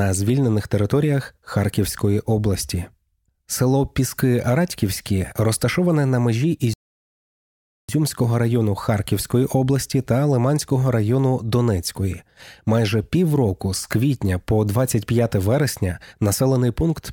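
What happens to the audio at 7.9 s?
At 7.89 s the speech resumes after a rebuffering stall that began at 6.74 s, just after "розташоване на межі". The player had run dry, so 1.15 s of silence was inserted. Unlike a dropout, it picks up exactly where it stopped, with nothing skipped.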